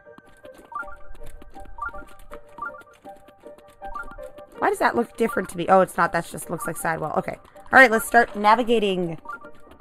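Channel delay causes comb filtering across the whole clip. One channel runs about a tenth of a millisecond late, a few samples, before the two are summed to mono. Shared content cancels at evenly spaced frequencies, the first near 5 kHz. The sound is hollow and phasey, with fixed notches.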